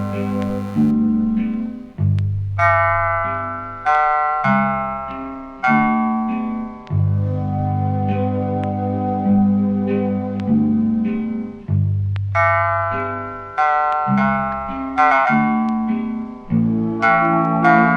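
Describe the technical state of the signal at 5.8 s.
Nothing is wrong with the audio at 5.8 s, where the signal shows no fault.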